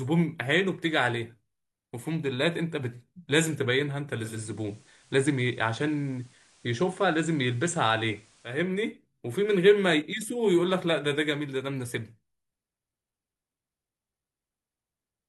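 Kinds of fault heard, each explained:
Digital radio blending to analogue: From 4.22 to 8.62 s the receiver loses its digital stream and cross-fades over about 0.2 s to the station's FM broadcast, then back. While on FM a faint hiss sits roughly 35 dB below the speech. On a spectrogram, a low noise floor fills in across that span. The waveform shows no level jump at either blend.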